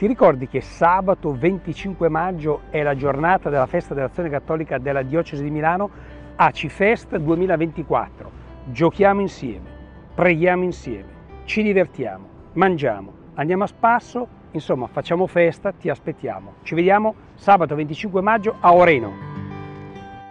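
No faults to report across the clip.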